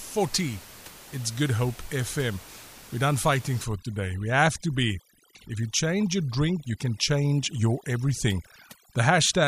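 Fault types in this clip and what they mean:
overdone noise removal: From 3.64 s to the end, an over-aggressive noise reducer clamps down on frequency bands it judges to be noise, leaving near-silent gaps with twinkling specks; a spectrogram shows patchy, speckled time-frequency holes between and within speech.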